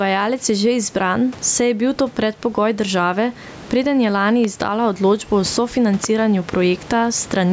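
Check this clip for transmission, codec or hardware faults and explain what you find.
Two faults are audible in the speech: gain pumping throughout, and two loud pops.

Gain pumping runs the whole length. The gain swings by roughly 15 dB, ducking under each loud syllable, most likely because the input gain is too high and a fast limiter keeps clamping it. On the waveform the envelope looks flattened.

The loud pops occur at 4.44 to 4.47 s, just after "preden je lani", and at 6.04 to 6.06 s. Each is a single sharp crack, roughly 15 dB and then about 10 dB above the speech, with the talking continuing underneath. They are likely voltage transients from a plug, switch or static discharge. A waveform shows narrow spikes, and a spectrogram shows thin vertical broadband lines.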